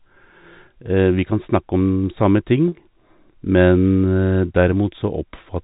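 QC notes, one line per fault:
2.68–2.72 s, packet loss with pitch repetition: a 40 ms gap, which fits four 10 ms packets, patched by looping the last pitch period, giving a brief buzzy hold.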